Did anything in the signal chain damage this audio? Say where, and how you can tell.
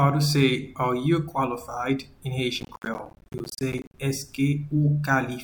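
Yes. From 2.60 to 3.98 s a gritty crackle tears through the sound, made of rapid tiny dropouts to silence. This is processor overload crackle at the driver or buffer stage: the processor missed dozens of buffer deadlines again and again over that stretch, buffers of around 10 ms.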